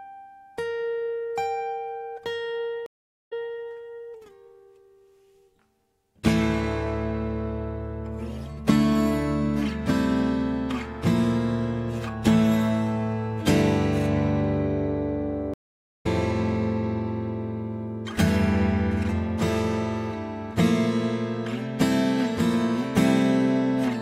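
The audio has two stream reconnect faults, at 2.86–3.52 s and 15.54–16.06 s. The connection drops, leaving silence of 396 ms and then 486 ms. A fresh decoder then resumes 261 ms earlier the first time and roughly 0.4 s later the second.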